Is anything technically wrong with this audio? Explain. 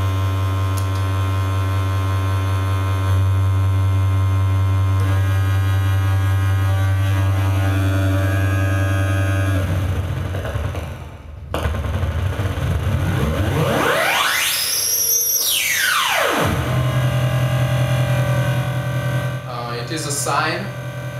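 No, nothing technically wrong can be heard in this audio. It comes across as intact throughout, with no audible faults to report.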